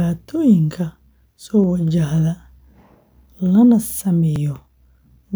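At 1.64 s and 4.36 s, abrupt skips in the speech, likely a dropped buffer (overrun) losing a few milliseconds; waveform shows discontinuities, spectrogram thin vertical lines.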